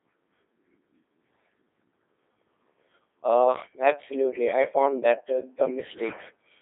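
A Codec 2 vocoder runs through the whole clip, rebuilding the speech from pitch, voicing and a spectral envelope with sine waves instead of keeping the waveform. The result is heavily robotic and buzzy, squeezed into about 250 Hz to 3.5 kHz with nothing above 3.6 kHz, which fits a rate near 2.4 kbit/s.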